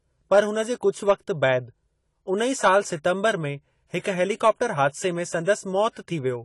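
Speech throughout carries plainly audible AAC compression damage, dull and smeared, with nothing above 11.5 kHz; a spectrogram shows a hard ceiling and patchy bands, likely from AAC-LC at a bitrate around 32 kbps. At 3.99 to 4.04 s, pre-echo adds a 48 ms hiss before an attack, visible as a smear leading the transient in the waveform.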